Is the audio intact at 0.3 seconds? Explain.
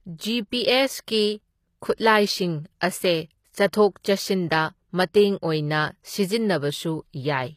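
No. At 0.3 seconds the speech carries the same damage it has through the whole clip, and it sounds like HE-AAC compression is the likely cause. The codec keeps only the lower spectrum and fakes the treble by copying lower bands upward under a coarse envelope, so the top end is not the original and its harmonics don't line up. The s sounds come out gritty and lispy, nothing reaches past about 14.9 kHz, and the damage is plainly audible, which fits a low bitrate around 24 kbps.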